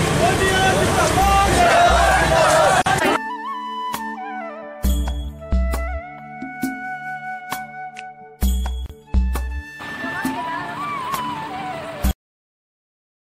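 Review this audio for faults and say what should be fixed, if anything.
Gaps at a join of encoded pieces at 2.82–2.86 s (44 ms) and 8.86–8.90 s (34 ms), six seconds apart. Untrimmed encoder delay and padding show as flat waveform slices and blank spectrogram columns. Trim encoder delay and padding before joining.

Cut-off end at 12.11 s: the final buffers never played, so the waveform drops straight to silence with no decay. Flush all buffers before closing the output.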